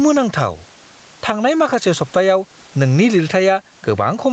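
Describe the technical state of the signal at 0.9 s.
At 0.9 s the level swings by around 10 dB, leaving loud and quiet passages squashed toward the same level. This gain pumping runs through the whole clip. It is likely caused by input gain set far too high for the microphone, with a fast limiter or compressor clamping down on every peak and releasing in the gaps.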